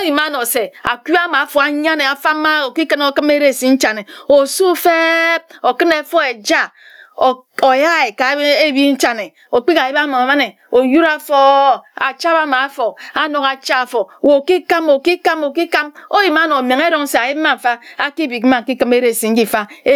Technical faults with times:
0.00-19.96 gain pumping

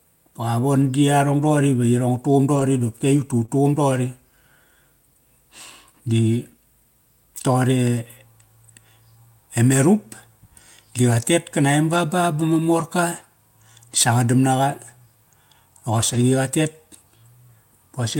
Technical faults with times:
0.81-0.87 lost packet rebuilt from error correction
2.55-2.61 lost packet rebuilt from error correction
3.45-3.50 short concealed packet loss
7.38-7.40 lost packet rebuilt from error correction
12.80 lost packet rebuilt from error correction
16.14 lost packet rebuilt from error correction

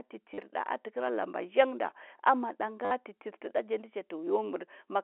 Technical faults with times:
0.34-0.38 packet loss with last packet repeated
2.85-2.91 packet loss with last packet repeated

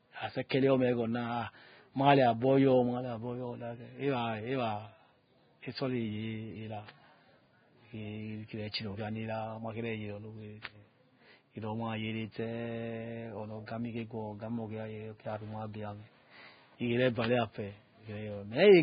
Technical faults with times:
0.00-18.82 Vorbis compression
0.49 pre-echo

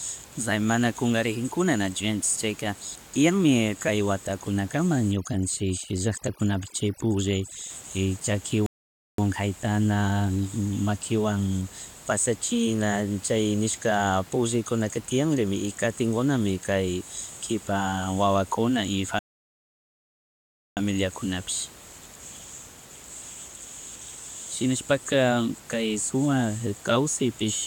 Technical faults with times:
5.12-7.70 overdone noise removal
8.66-9.18 rebuffering stall
19.19-20.77 rebuffering stall

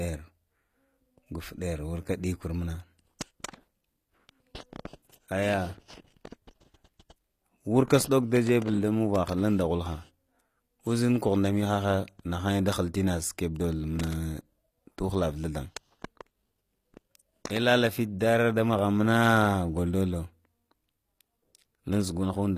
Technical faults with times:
0.00-22.58 HE-AAC compression

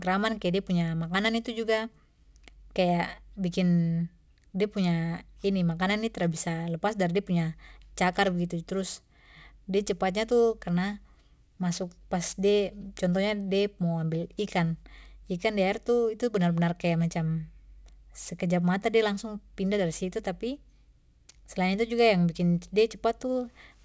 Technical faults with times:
0.00-23.85 aliasing

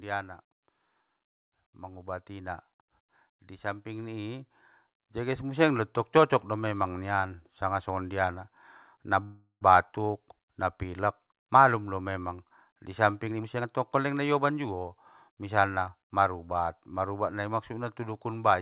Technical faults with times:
1.58-5.70 automatic gain rising
9.24-9.63 call audio freeze
13.27-15.37 jitter buffer speed-up

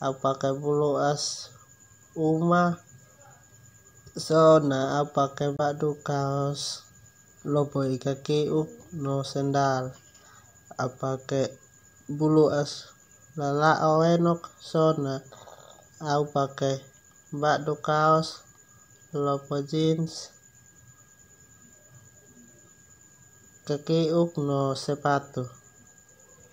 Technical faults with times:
5.56-5.60 Bluetooth dropout

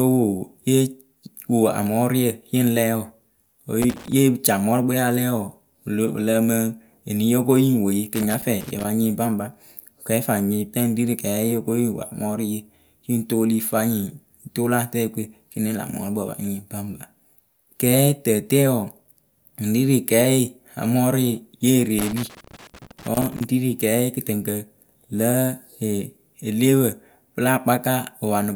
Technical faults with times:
3.82-4.12 loose connector crackle
8.15-8.85 loose connector crackle
21.99-23.44 loose connector crackle

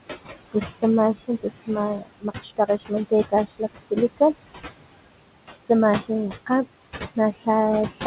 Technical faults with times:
0.00-8.06 noise suppressor artifacts
1.15-1.69 speech cut by the noise suppressor
1.98-2.92 speech cut by the noise suppressor
3.29-3.62 speech cut by the noise suppressor
7.33-7.47 speech cut by the noise suppressor
7.90-8.03 speech cut by the noise suppressor

